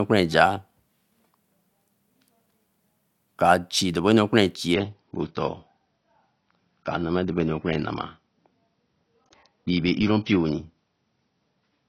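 Right after "chi krabenu ra kparan", at about 4.74 s, the speech drops to a lower-bitrate version of the adaptive stream and stays there to the end. There's no gap, just a sudden loss of quality. The player switched down, most likely because the connection slowed. Nothing survives above about 6.6 kHz, so the top end goes dull, with codec artefacts creeping in. That points to a jump from a comfortable AAC rate down to something around 24 kbit/s.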